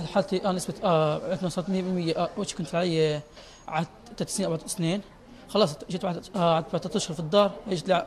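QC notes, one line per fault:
No faults heard anywhere in this clip.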